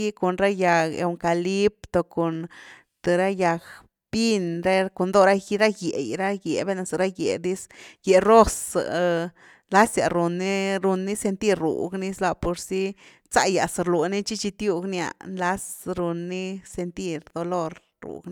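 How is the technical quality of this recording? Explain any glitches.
No glitches or technical faults can be heard anywhere.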